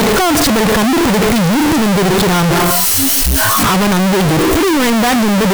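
From the very start and for the whole clip, the speech comes through brutally loud and harsh, the waveform slammed into near-square blocks at an almost fixed, high level. Background noise sits level with the voice. That's a float read as integer, likely 32-bit float samples interpreted as 32-bit integers, though pitch still carries.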